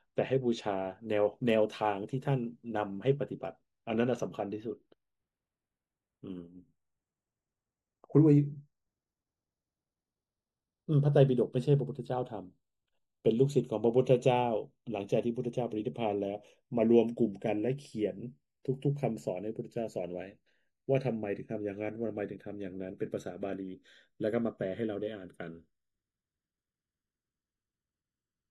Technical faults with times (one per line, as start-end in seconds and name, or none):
0.00-28.51 channels drifting apart